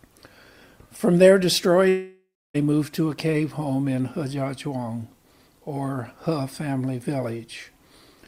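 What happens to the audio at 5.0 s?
Nothing goes wrong at 5.0 s: the audio passes through that moment intact, with no dropout, click, glitch or other fault.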